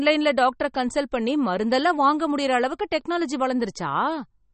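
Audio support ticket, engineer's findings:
MP3 compression, throughout. Speech has a plainly audible watery, swirly texture, nothing above 8.4 kHz. Likely a starved MP3 encoder, fitting a 32 kbps stream: treble cut at a fixed frequency, weak spectral lines switching on and off between frames.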